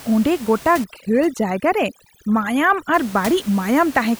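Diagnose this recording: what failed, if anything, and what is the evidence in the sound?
From 0.84 s to 2.94 s the gaps fall to near silence flecked with twinkling specks. This is overdone noise removal in call processing. Bands sitting near the noise estimate are cut hard, taking quiet speech detail with them.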